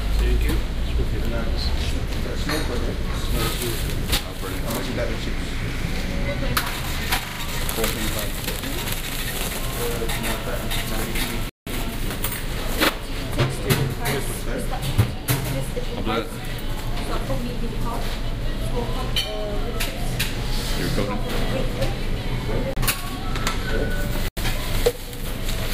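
Repeated buffers at 3.44 s and 4.72 s: new audio failed to arrive in time, so the playback device played its last block again. Each repeat lasts 40 ms, which fits a 40 ms buffer, and sounds once more with a hard join, giving a brief stutter. At 7.28 to 7.40 s the same block plays three extra times, a longer stammer of about a tenth of a second. Another single repeat follows at 12.85 s.

A Bluetooth stall at 11.49 s cuts the audio to silence for 173 ms before it resumes. Further stalls at 22.73 s (31 ms) and 24.28 s (86 ms) give shorter dropouts. The likely cause is interference delaying packets until the headphones' buffer ran dry and playback paused until resent data arrived.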